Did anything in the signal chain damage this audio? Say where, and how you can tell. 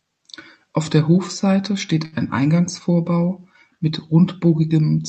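Yes, at the network and jitter buffer stage of the WebRTC call path: a short stall from a late packet between 2.05 and 2.14 s. The sound is held for about 70 ms with a slight buzz or dip, then continues where it left off. Nothing is lost, but everything after arrives roughly 70 ms later.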